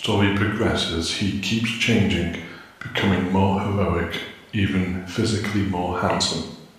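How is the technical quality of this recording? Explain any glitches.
The technical quality of this recording is good, with no glitches to explain.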